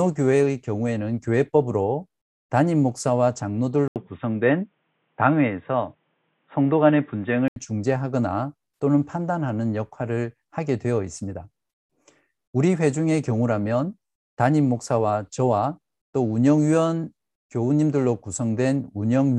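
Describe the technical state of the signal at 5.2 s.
At 5.2 s the signal is inside a stretch, from 3.88 to 7.56 s, where the input has likely switched to a poorer device. A gap of 80 ms of silence marks the switch, and then the speech turns dull and boxy, with nothing above 3.8 kHz, the narrow band of a lesser microphone or headset call profile. A faint new background noise sits far beneath the speech, and the level stays about the same.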